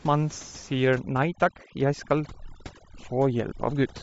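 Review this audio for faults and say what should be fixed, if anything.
The speech has a grainy, breathy edge from start to finish, with noise-like hiss standing in for the upper frequencies. This is likely Bluetooth LC3 compression, and the damage suggests a low bitrate near 32 kbps with 10 ms frames. Prevent it by raising the LC3 bitrate or using a wired path.

From 0.9 s to the end, the room noise, about 21 dB below the speech, drops and breaks up into twinkling specks. This is overdone noise removal, cutting bands near its noise estimate along with quiet speech. Prevent it by lowering the reduction strength.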